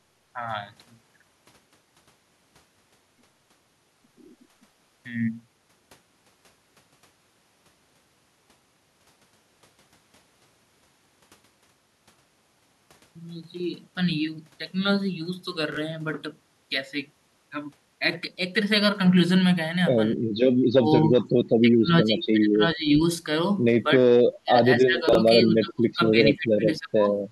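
At 15.72 to 15.77 s there is a brief jumbled flicker. This is chunks out of order: a 21 ms slice of audio arrived one chunk late and played after its successor, so nothing is missing but the sequence is scrambled across three abrupt joins.

From 20.22 to 20.31 s the room sound briefly sinks by about 13 dB, for roughly 40 ms in total, then returns. This is background gated by the echo canceller, which pulled the microphone down hard while the loudspeaker was active.

The talker then repeatedly dips and breaks up, at 20.71 to 21.24 s, 21.62 to 22.99 s and from 23.85 s to the end. The drops reach about 30 dB in the first stretch and about 20 dB later. The likely cause is speech suppressed in double talk, with the canceller unable to separate the near voice from the echo of the far side and turning both down.

At 25.09 to 25.15 s, within that last stretch, a second garbled moment occurs. Chunks are out of order again, with a 21 ms chunk landing two chunks late.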